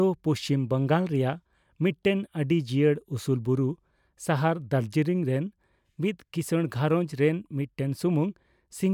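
Nothing in the recording stood out as a technical problem on listening.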